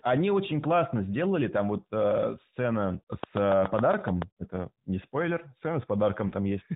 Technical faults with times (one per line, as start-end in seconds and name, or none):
3.23-4.23 train of clicks
6.28-6.32 lost AMR speech frames